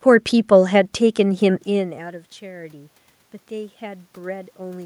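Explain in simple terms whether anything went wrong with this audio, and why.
From about 1.69 s to 4.81 s, the voice and the room noise behind it slowly swell louder together, as if someone were gently turning up a volume knob. This is automatic gain rising. Around one and a half seconds in, the talker moved away and the voice at the microphone dropped sharply. The system's automatic level control heard the quieter input and spent roughly three seconds raising its gain to compensate, lifting the background along with the voice.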